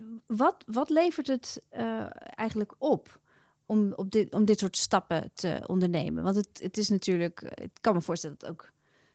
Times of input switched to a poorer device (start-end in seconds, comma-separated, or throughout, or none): none